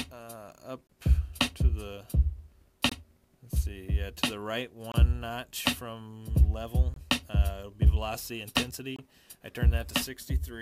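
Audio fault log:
0.87–0.89, 2.89–2.92, 4.92–4.94, 6.94–6.96 and 8.96–8.99 s, gap between chunks: the audio arrives in 2.0 s chunks with about 23 ms of silence inserted at each join. Nothing is lost, but each hole interrupts the sound every two seconds.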